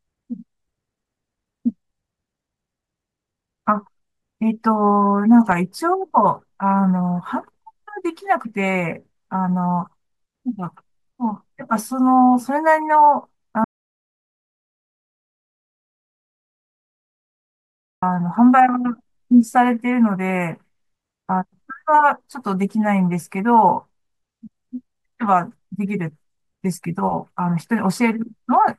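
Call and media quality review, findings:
Audio dropout to silence, 13.64–18.03 s: input likely lost while the recorder kept writing silence; speech cuts out mid-flow for 4.38 s, dead silence, no room tone, content gone.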